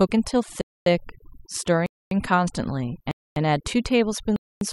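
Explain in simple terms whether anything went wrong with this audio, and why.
Two things went wrong. Overdone noise removal runs through the whole speech clip. The cleanup was set too strong, so the background is near silent with twinkling specks.

There is also a gap between chunks. The speech stops dead for a quarter second at 0.61, 1.86, 3.11 and 4.36 seconds. The audio arrived in one-second pieces with silence left between them.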